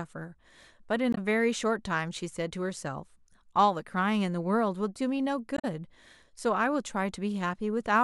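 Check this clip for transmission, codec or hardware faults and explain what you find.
Two short faults are present, both from damaged data in a compressed stream. They occur at 1.12 to 1.18 s and at 5.56 to 5.65 s. Bad bytes corrupt frames there. The decoder misreads them, loses sync and hunts for the next frame header. Each break is a brief chirp, squawk, click or short hole in the speech.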